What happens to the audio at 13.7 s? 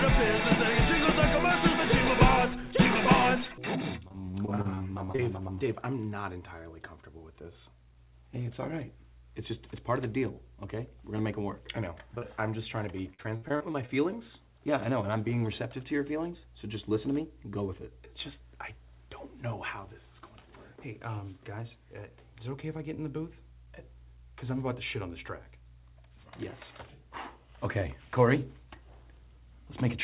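At 13.7 s you're in the middle of a burst of repeated packet loss, the robotic-sounding kind, running from about 13.14 to 13.9 s. Seven gaps land in that stretch, the longest around 57 ms, and each one gets papered over by stretching out the last bit of sound received. Nearly a third of that span is filler, so it comes out choppy, with bits dropping out, on top of a band that stops at 4 kHz, which points to a G.711 call path.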